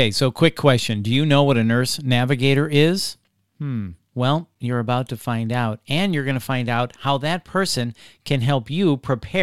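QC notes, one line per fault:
Nothing stood out on listening to this speech recording.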